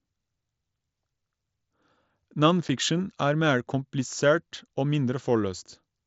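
At about 2.69 s, right before "er mer komplisert", there's a tiny unconcealed Bluetooth headset packet loss: a roughly 7.5 ms chunk of speech, which fits a single lost frame, drops out and is replaced by silence or an idle pattern, leaving a short hole with hard edges. The mSBC wideband link carries on around it.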